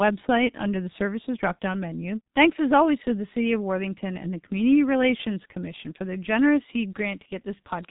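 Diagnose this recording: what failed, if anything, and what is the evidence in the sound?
The failure is at the codec stage: the speech has passed through the G.723.1 codec, and the damage is heavy for the whole clip. The spectrum stops dead at 3.8 kHz, so sibilants and fricatives lose their energy and consonants smear into each other. The vowels take on a hoarse, buzzy quality, which fits a bitrate near 6 kbit/s. Coding in long frames with a slowly updated vocal-tract model cannot follow fast articulation, so transitions blur and the speech sounds muffled throughout.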